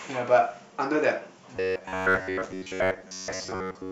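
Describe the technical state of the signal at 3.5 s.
Robotic sound from repeated short buffers runs from 1.57 s to the end of the clip at 3.92 s. Most of the audio there is likely short chunks of about 10.7 ms repeated while real speech is skipped, imposing a rigid, metallic 93.8 Hz buzz.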